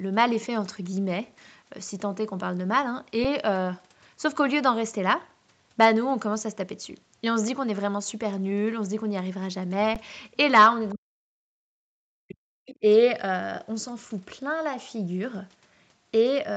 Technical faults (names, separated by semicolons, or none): underrun with held sample; speech suppressed in double talk; other side's voice leaking through